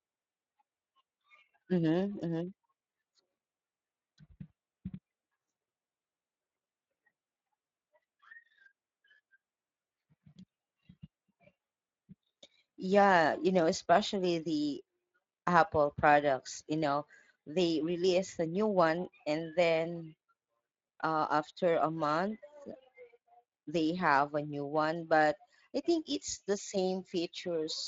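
Speech runs through the Speex codec for its whole length, and the damage is plainly audible. The CELP coding leaves the voice grainy and hoarse. The remaining detail suggests a moderate setting, roughly 20 kbps.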